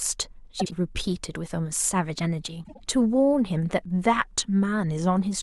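At 0.60–0.73 s and 2.63–2.80 s, frames out of order: two neighbouring 52 ms blocks swap places, giving a garbled flutter but, unlike a dropout, no lost time.

From 4.03 to 5.18 s the speech slows by 5.3% and drops about 94 cents, then snaps back: a sustained detuning, not wavering wow, likely a drift correction step.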